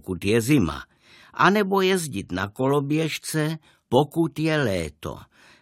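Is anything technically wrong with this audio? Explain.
No, nothing technically wrong can be heard here.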